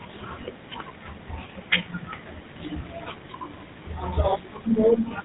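GSM full-rate codec coding runs throughout the speech, and the damage is plainly audible. The vocal tract is modelled and driven by regular pulses, with the excitation thinned to every third sample and nothing passed above 4 kHz. This gives the voice a muffled, buzzy, gravelly roughness. The sound points to a 13 kbps bitrate.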